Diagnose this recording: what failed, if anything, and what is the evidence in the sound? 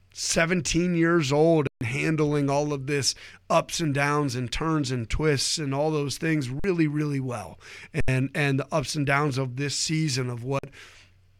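The driver buffer underran four times (an underrun with held sample): the output froze flat at 1.67, 6.60, 8.01 and 10.59 s, then resumed after live audio was lost.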